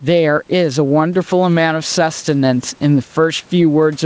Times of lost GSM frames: none

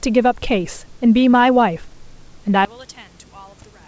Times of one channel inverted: 2.65-3.88

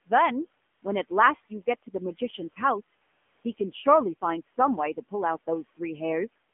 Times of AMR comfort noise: 0.74-0.82, 3.04-3.44, 6.52

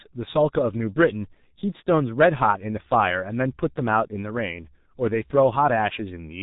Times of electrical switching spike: none

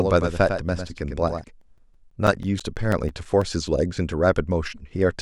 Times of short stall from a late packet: none

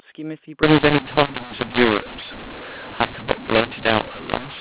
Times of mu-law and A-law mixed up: 0.63-4.61

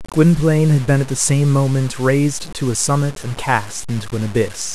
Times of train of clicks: none

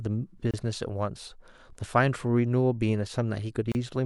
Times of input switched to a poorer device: none

